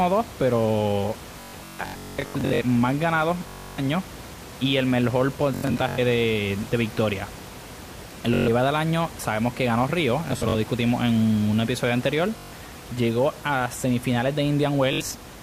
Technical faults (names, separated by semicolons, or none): Bluetooth stutter